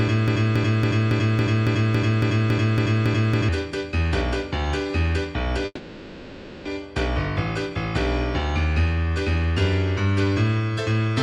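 From the first instant to 3.49 s, a broken-record loop is already under way. A fragment about 0.28 s long repeats exactly, back to back, twelve times. The repeats are identical, with no variation between them. The likely cause is a player, encoder or stream that stalled and kept sending the last piece it held. Whatever should have played during those seconds is lost.

From 5.65 to 6.67 s there is a call audio freeze. The last sound is stretched into a fading buzz or hiss for about one second, with a brief silence of about 30 ms. Then the audio resumes exactly where it stopped. Nothing is missing, but everything after runs one second later. The likely cause is delayed packets that left the jitter buffer empty.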